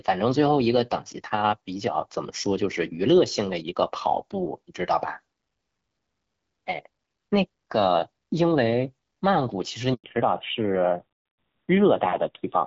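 At 9.94 s there is a handover gap. The call switched networks, and no speech frames arrived while the link changed. The speech dies away and stays silent for 100 ms, until 10.04 s. Whatever was said in that window is gone.

From 10.04 s to the end comes a fallback to narrowband. Before this point, the wideband HD Voice coding carries speech with light damage, which fits AMR-WB at about 12.65 kbit/s. After the switch, everything above 4 kHz is gone. The speech sounds duller and rougher, which points to AMR-NB at around 7.4 kbit/s.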